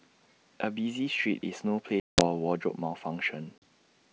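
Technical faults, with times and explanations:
2.00–2.27 s and 3.58–3.63 s: packet loss on an ADPCM call. The speech drops into hard-edged silence for about 180 ms in the first gap, which fits roughly ten lost packets, and for 40 ms in the second, about two packets. Because ADPCM codes only differences, the receiving decoder's predictor and step size lose track of the sender's during each hole, so the speech comes back slightly distorted before settling within some tens of milliseconds.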